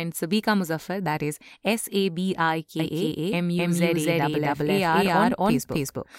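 From 2.79 s to the end, the speech is joined by an equally loud, dry copy about a third of a second behind: a doubled audio track, likely a second, slower capture path.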